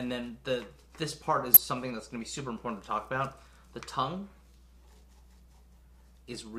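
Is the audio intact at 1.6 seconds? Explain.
No. A corrupt frame decoded from 1.54 to 1.57 s puts a short, loud glitch near -10 dBFS across a couple of frames. It is misplaced energy from misread codes, not the silence or smeared repeat of a lost frame.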